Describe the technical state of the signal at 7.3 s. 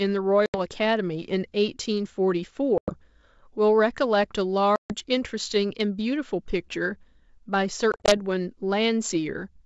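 At 7.3 s the signal is intact, with the speech carried cleanly through G.722 wideband telephone coding at 64 kbit/s and no fault audible at that moment.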